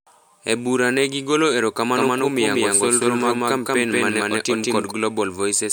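From 1.96 s to 4.92 s the speech picks up a doubled audio track: a second, full-band copy trailing about a fifth of a second behind, at roughly the same level as the original. It has no decay or room colour, and it cuts in and out abruptly at both ends. Most likely the same signal got captured twice, once through a slower path, and both copies ended up in the mix.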